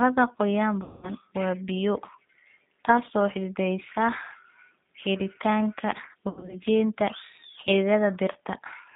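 Throughout, the G.729 codec at 8 kbit/s holds the speech to 150 Hz–3.7 kHz and makes it slightly rough and synthetic. That grainy, pulse-built texture sets it apart from simple band-limiting. From 0.83 to 1.1 s, VoIP packet loss concealed by the speech codec covers 200 ms of missing audio before "waa biyo". The decoder stretches the last sound into a fading buzzy tone or coloured noise instead of leaving a silent dropout. From 6.29 to 6.56 s, 140 ms of losses scattered over 200 ms, the longest run 80 ms, cause shorter stretched smears, and the sound stays weak briefly afterwards.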